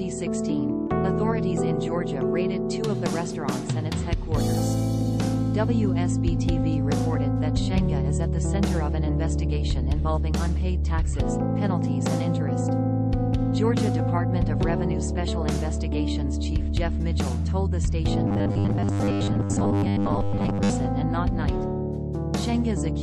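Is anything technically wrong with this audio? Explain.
Yes, there's a robotic sound from repeated short buffers between 18.28 and 20.70 s. The audio goes rigid and metallic with a fixed 100 Hz buzz. The likely cause is the last 10 ms being looped over and over while fresh audio is skipped, for roughly 70 percent of that stretch.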